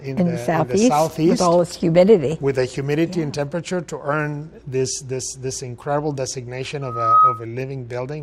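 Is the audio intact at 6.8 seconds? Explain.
No, a loudspeaker feedback squeal runs from 6.81 to 7.44 s: the microphone re-amplifies its own speaker output, so a 1.3 kHz tone swells within about a third of a second to roughly 10 dB above the sound.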